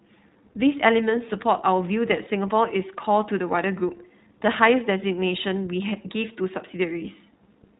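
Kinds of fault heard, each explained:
iLBC codec: The speech has been through a narrowband VoIP codec that handles each 20 ms frame on its own, without borrowing from the frame before. The damage is plainly audible. Everything above about 3.9 kHz is gone, so sibilants and consonant detail sound dull and boxed in. The voice stays clear but takes on a slightly rough, synthetic edge. The grain points to the 15.2 kbps mode, which fits 20 ms frames.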